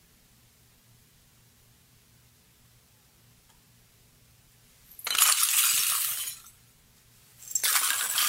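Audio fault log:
No faults heard.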